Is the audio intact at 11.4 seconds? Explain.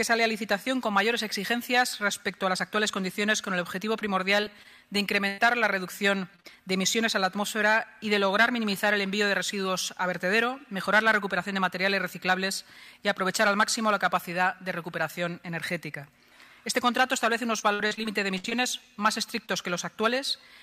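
Yes, the audio at 11.4 seconds is intact, with no dropout, click, distortion or other fault at that moment.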